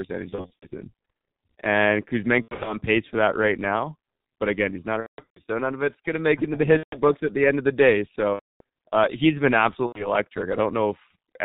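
Speech throughout sounds muffled and hoarse, with nothing above 4 kHz and smeared consonants. The band-limited, rough texture fits the G.723.1 codec, working at around 6.3 kbit/s, whose slowly updated voice model heavily damages fine detail. At 0.29–0.75 s, 2.42–2.76 s, 5.01–5.40 s, 6.77–6.98 s, 8.34–8.61 s and 9.86–10.08 s, the sound stretches into a buzzy tone or coloured noise that fades, and stays weak afterwards. This is VoIP packet loss concealed by the speech codec: the decoder extrapolates its last pitch and filter through the missing 30 ms frames, with gaps of up to 180 ms around 5 s.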